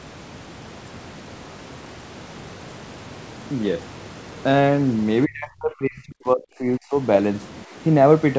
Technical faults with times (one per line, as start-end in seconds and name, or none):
5.26-6.97 speech suppressed in double talk
7.65-7.75 speech suppressed in double talk